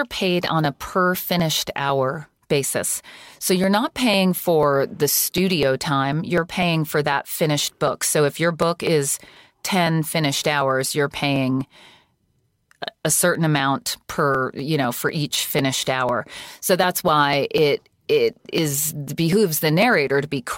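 From 0.15 s to 20.32 s the speech shows periodic USB or driver dropouts: something is stalling the USB bus or audio driver every 0.25 s, and each stall drops around a millisecond of samples outright rather than padding the gap with silence. The waveform jumps straight across each missing slice, so around seventy small ticks land at a steady four-per-second rhythm, audible only while the voice is sounding and vanishing in pauses.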